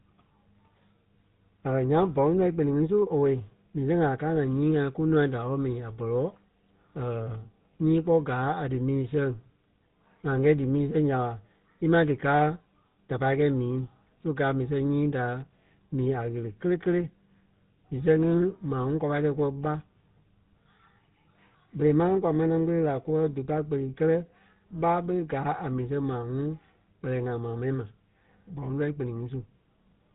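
From start to finish the speech carries GSM full-rate codec damage, plainly audible, with nothing above 3.9 kHz. The codec rebuilds the vocal tract filter and excites it with a thinned pulse train, which leaves a buzzy, gravelly roughness on every voiced sound. The bitrate points to the 13 kbps full-rate mode.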